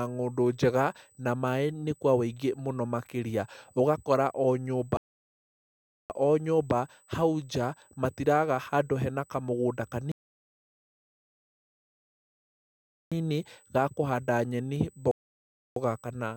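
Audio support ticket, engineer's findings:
USB whine throughout. Steady fixed-pitch tone at 8 kHz, about 35 dB under the speech. Probable cause: USB interface power or ground. 125-microsecond microframe current draw leaking into the analog path. Pitch matches the microframe rate exactly.

Rebuffering stalls, three. Dead silence at 4.97–6.10 s, 10.12–13.12 s and 15.11–15.76 s, adding 1.13 s, 3.0 s and 0.65 s. First falls after "ũgakora o nyũmba" and resumes with "o nyũmba hau nja". Player buffer underrun. Playback halts, resumes at the same point, nothing lost.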